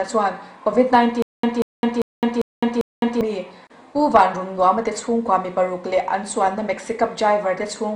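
From 1.22 to 3.21 s, playback likely stalled, and each retry replayed the last fragment before running empty. The stutter with silent gaps repeats a 187 ms burst five times, every 397 ms, with 210 ms of digital silence between. The intended audio is lost.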